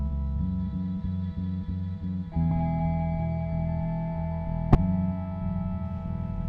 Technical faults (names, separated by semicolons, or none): damaged data in a compressed stream